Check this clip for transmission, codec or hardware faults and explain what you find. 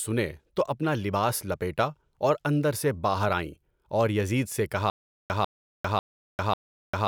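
One fault is present. Stutter with silent gaps runs from 4.9 s to the end, right after "یزید سے". A stalled player or stream likely replayed its last 0.15 s fragment at each retry. That burst returns four times, every 0.55 s, with 0.4 s of digital silence between, and the speech that should follow is lost.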